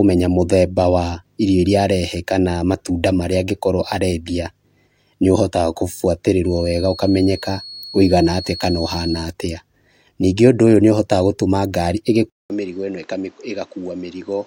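From 6.42 to 9.32 s a thin, steady tone at 4.3 kHz sits roughly 15 dB under the speech, swelling and fading slowly in level. That's a feedback whistle, likely the speaker-to-mic loop hovering right at the edge of ringing without running away.

At 12.3 s there's a 200 ms gap, then the speech comes back about 10 dB quieter and dull, with nothing above 8 kHz and new background noise roughly 30 dB down. That's likely the input switched to a poorer device, and it stays that way through to the end.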